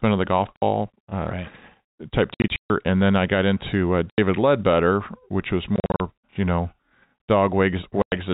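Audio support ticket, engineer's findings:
Packet loss filled with silence. Hard-edged dropouts at 0.56–0.62 s, 2.34–2.7 s, 4.10–4.18 s, 5.76–6.0 s and 8.02–8.12 s. The holes are multiples of 20 ms, which fits 20 ms packets. Silence is substituted, with no concealment. Network path or jitter buffer. The first gap falls between "of the golf" and "uh right type". Another comes after "uh right type", with 240 ms lost across 360 ms. The gap at 4.10 s follows "I got into uh".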